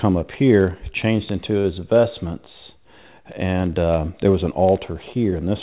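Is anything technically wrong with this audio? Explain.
Yes, two faults are audible. Word clock ticks run from 0.13 s to the end: an unlocked receiver clock, roughly 300 ppm off, drops or repeats one sample about every 0.07 s, giving steady sharp clicks. A short stall from a late packet at 1.60 to 1.76 s: the jitter buffer ran dry, so about 40 ms of sound was held and stretched before resuming, with nothing lost. The 4 kHz ceiling of the G.711 call path is also audible.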